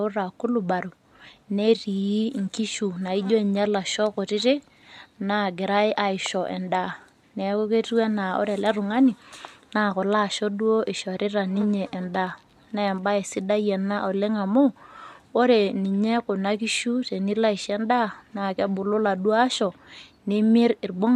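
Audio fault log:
No faults detected in this speech recording.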